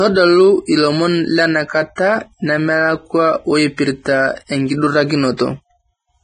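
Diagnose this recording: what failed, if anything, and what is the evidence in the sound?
Throughout, the speech is grainy and hissy with nothing above 9.7 kHz. This is heavy damage at the codec stage, likely Vorbis compression at a rate that fits about 21 kbps.

A short hiss comes just before attacks at 1.95–1.98 s and 5.37–5.39 s. This is pre-echo: the codec spreads quantisation noise across the whole transform block, smearing 23 to 25 ms ahead of each onset.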